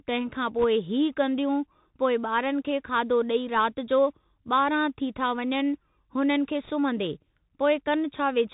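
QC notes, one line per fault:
Throughout: Bluetooth CVSD headset codec. The audio has passed through the narrowband headset codec, which fits a 64 kbps CVSD stream: each sample is coded as a single up-or-down step whose size adapts as it goes. Nothing above 4 kHz survives, so the speech sounds boxed-in and telephone-like. Sharp, loud high-frequency moments outrun the step size and distort, s sounds come out scratchy, and a fine granular hiss sits under the speech for the whole clip.
0.61–0.64 s and 6.64–6.70 s: bit errors on a Bluetooth voice link. In these two short stretches, flipped bits on the headset link corrupt the step sequence, at around 1 percent in the first and about 2 percent in the second. Because every bit carries only a small step and the error fades out as the codec recovers, there are no hard clicks. Instead a brief rushing crackle breaks through, noticeably rougher at 6.64 s where the error rate is higher.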